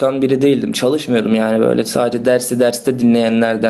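The input gain is likely set far too high for the microphone, leaving a fast limiter or compressor to haul the level back down whenever the speech gets loud, so this speech clip shows gain pumping from start to finish. The level swings by around 10 dB, while loud and quiet passages are pressed close together into a squashed, breathing sound.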